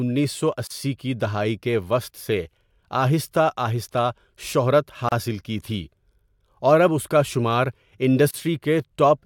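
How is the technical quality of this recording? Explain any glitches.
The recording has three short gaps at joins of encoded pieces, at 0.67 to 0.70 s, 5.09 to 5.12 s and 8.31 to 8.34 s, each about 31 to 33 ms long. The speech cuts to silence with smeared edges and then resumes exactly where it stopped. Separately encoded segments were joined with each encoder's start-up delay and final-frame padding left in. Nothing is missing, which separates it from a packet-loss dropout, where sound is lost.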